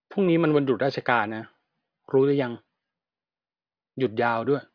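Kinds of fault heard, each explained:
Nothing stood out on listening to the speech in this recording.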